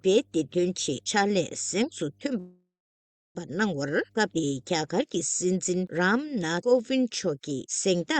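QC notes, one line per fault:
0.00–4.76 s, mains hum: a steady low tone at 50 Hz with some low harmonics sits under the audio, roughly 35 dB below the signal, so it is quiet but continuous until it stops at 4.76 s. That pitch points to the power line leaking into the signal path, as happens when a ground loop forms or a transformer sits close to the cabling, and 50 Hz fits a 50 Hz mains supply.
2.39–3.37 s, call audio freeze: the last sound before 2.39 s is drawn out into a buzz or hiss that fades, leaving about 0.65 s of silence before the audio resumes at 3.37 s exactly where it left off. The likely cause is packets held up in transit, so the jitter buffer ran dry and the receiver stretched the final sound to cover the wait. Roughly 0.96 s was inserted, nothing was lost, and everything afterward now runs that much later.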